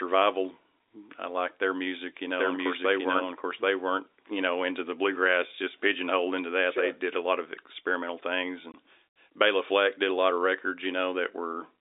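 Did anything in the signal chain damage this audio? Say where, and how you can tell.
Yes, at the network stage: one packet of speech went missing and the receiver filled it with silence. Right after "lot of experimental things", at 8.72 s, the telephone-band speech drops out for 20 ms, with hard edges, which points to a single lost packet.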